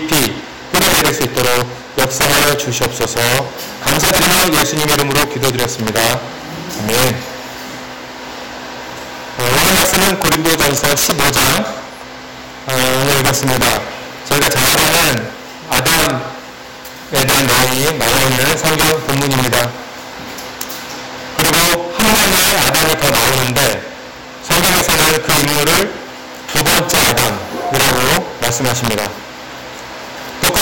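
Integer overflow runs through the whole clip. The signal was driven about 16 dB too hot for the integer range. Nothing limited it at the top. Each peak that crossed the ceiling wrapped around to the opposite extreme instead. Roughly 7 percent of samples land over that line. Every loud moment therefore carries violent, splintering cracks. They are far sharper and harsher than ordinary clipping.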